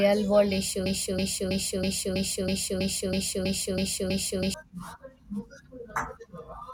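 Speech, and it hits a broken-record loop from 0.86 s to 4.54 s: a 0.32 s chunk repeats back to back eleven times, so whatever should have played there is gone. That's likely the player or stream stalling and resending its last buffered fragment.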